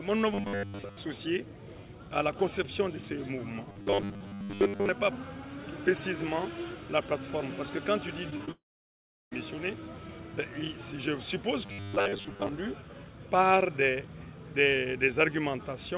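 From 0.34 to 0.97 s, 3.70 to 4.89 s and 11.66 to 12.49 s there is robotic sound from repeated short buffers. New audio likely arrived too seldom, so a tiny slice kept being replayed in place of most of the real audio. The steady 100 Hz buzz fits a 10 ms slice, and it turns the sound into a rigid, metallic buzz.

At 8.30, 8.37 and 8.45 s, three short concealed packet losses follow one another, each about 20 ms of audio that never arrived in time. The receiver bridged each gap by extending the preceding sound, so each one comes across as a brief smear or wobble.

From 8.51 to 9.33 s comes a long network dropout, likely caused by a stretch of about 0.8 s in which no audio arrived at all. The last sound carries on only briefly, then about 0.7 s of silence follows before the audio resumes with that portion missing. Throughout, the call path's narrow band, with nothing above 4 kHz, fits G.711 coding at 64 kbps.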